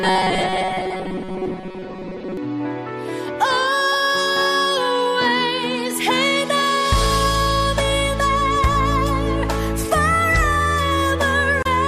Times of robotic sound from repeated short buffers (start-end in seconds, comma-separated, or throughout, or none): 0.01-2.37